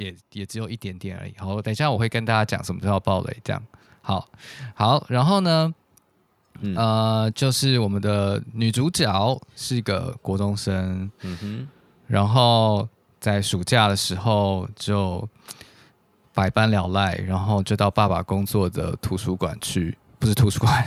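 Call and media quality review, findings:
Automatic gain rising, 0.52–2.59 s. Speech and background noise floor swell together by about 9 dB over roughly two seconds. Probable component: AGC on capture path, judging input too quiet and ramping gain up gradually, not a talker level change.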